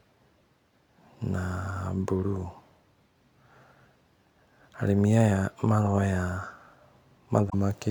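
At 7.46 to 7.54 s, damaged data in the compressed stream makes the decoder misread frames and lose sync, giving a brief glitch while it searches for the next frame header.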